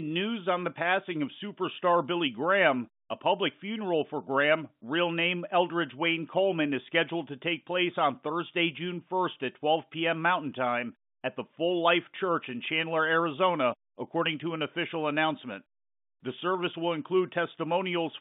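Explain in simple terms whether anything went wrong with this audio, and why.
Nothing went wrong with this audio: it is ordinary telephone-line speech, and nothing in it points to a fault.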